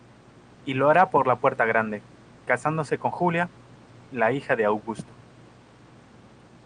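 The speech sits about 28 dB above a bed of room noise that belongs to the recording itself, and its high end stops near 12 kHz in the way expected of an Opus call path, with no technical fault to be heard anywhere in the signal.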